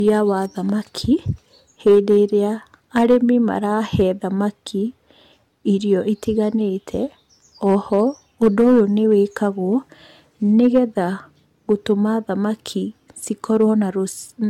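From start to finish the speech sounds swirly and hollow, consonant attacks are smeared, and there's nothing above 17 kHz. That's likely generation loss, with the audio re-encoded about five times through what fits a 96 kbit/s AAC-LC chain, each pass stacking fresh quantisation noise.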